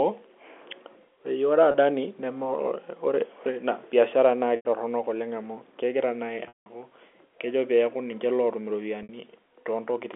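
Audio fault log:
1.71 s to 9.09 s, packet loss with pitch repetition: four gaps, at 1.71 s (30 ms), 4.56 s just after "biashara enye naa" (90 ms), 6.48 s (180 ms) and 9.03 s after "kejo peaku ninche lootum" (60 ms). The receiver loops the last pitch period, so the 30 ms gap becomes a held, buzzy tone, while the longer gaps fade to silence before sound cross-fades back. A plain dropout would leave an abrupt hole or click instead.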